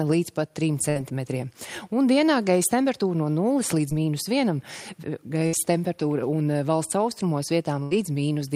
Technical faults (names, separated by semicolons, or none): burst of packet loss; short concealed packet loss